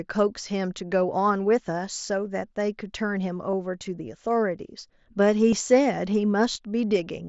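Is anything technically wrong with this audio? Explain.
Yes, there's concealed Bluetooth headset packet loss at 3.51–3.53 s, 5.51 s and 6.53–6.55 s. Each gap runs about 20 ms, which fits a few lost headset frames. The phone filled them by repeating the best-matching recent waveform, so you get a brief buzzy, held patch with a slight warble as real speech resumes. The wideband mSBC link underneath carries speech up to 8 kHz with a faint grain.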